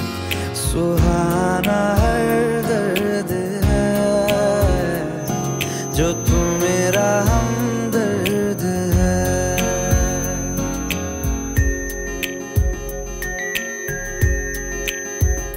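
A feedback whistle enters at 5.14 s and continues to the end of the clip: a thin, steady tone at 6.2 kHz sitting around 15 dB under the main sound and swelling and fading slowly in level. The likely cause is a loudspeaker-to-microphone loop held right at the edge of instability, where the gain at that one frequency is just enough to keep it ringing without building into a runaway howl.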